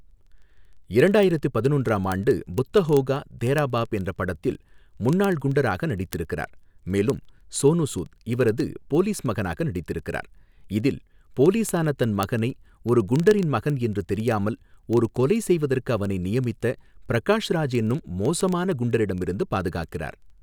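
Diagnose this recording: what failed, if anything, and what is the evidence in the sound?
The failure is in the digital link between devices. Word clock ticks run through the whole speech clip, from 0.11 s to 20.42 s. There are hundreds of them, about one every 40 ms, so roughly 25 per second at a steady rate. The receiving device is not locked to the sender's clock, and the two differ by around 500 ppm. Each time the clocks slip past each other, a single sample is dropped or repeated, and that leaves a brief tick.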